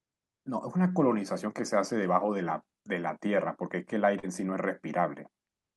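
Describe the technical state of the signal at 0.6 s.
At 0.6 s the speech signal is intact, with no audible fault at that moment.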